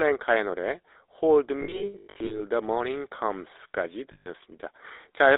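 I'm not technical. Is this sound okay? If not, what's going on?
No. The whole clip went through the GSM full-rate codec, an old mobile-phone voice system that rebuilds speech from a rough model and keeps only a narrow band, roughly 300 Hz to 3.7 kHz. That makes the speech sound plainly buzzy, gravelly and thin throughout.

There are also lost GSM frames in two places. Between 1.6 and 2.42 s, small chunks of the signal went missing in scattered bursts, the longest about a tenth of a second. Each gap was filled by repeating the last good chunk, so you hear a rough, metallic ring there instead of the speech. The same happens once more from 4.12 to 4.27 s, with 140 ms lost in all.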